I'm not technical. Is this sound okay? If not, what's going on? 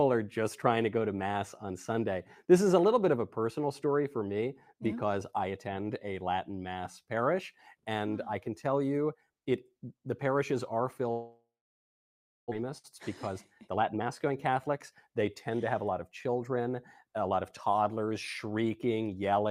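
No. Two things go wrong.

From 11.11 to 12.63 s there is what sounds like a long network dropout, most likely a stretch where the audio stopped arriving over the connection. The player tries to cover the gap by stretching out the last bit of sound into a fading buzz, then gives up, leaving about a second of silence. When the sound returns, roughly a second of the original is simply gone.

Right after, from 13.10 to 16.36 s, comes a jitter buffer speed-up. The delayed audio piled up in the receiver's waiting area, so it quietly snipped out many tiny slivers to catch up, about four tenths of a second in total. You hear this as the sound running about 11% faster at an unchanged pitch, so it feels rushed.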